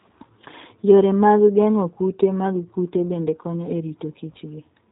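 Speech that sounds rough, slightly synthetic and muffled throughout, with nothing above about 3.8 kHz, is the signature of the G.729 codec, whose damage here fits its 8 kbit/s rate.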